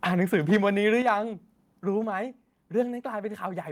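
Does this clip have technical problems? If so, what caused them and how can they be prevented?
Yes. The microphone input gain was likely set too high, driving peaks past the converter's limit; from 0.34 to 0.57 s and again from 1.07 to 1.09 s the loudest moments exceed full scale by about 3 dB and 2 dB. Their flattened tops give a harsh, crackling microphone overload. Lowering the input gain until peaks sit comfortably below full scale prevents this.

The call software likely detected that overload and cut the device's input volume in single steps, producing microphone volume stepped down events at 1.02 s (about 6 dB) and 2.04 s (about 4 dB), where voice and background abruptly drop. Disabling automatic gain adjustment and setting a safe fixed level prevents these jumps.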